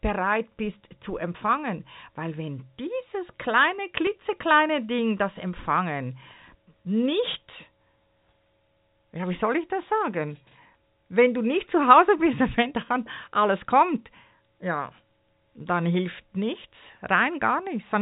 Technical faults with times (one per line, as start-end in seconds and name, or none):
4.07 dropped samples
15.60 dropped samples
16.54 dropped samples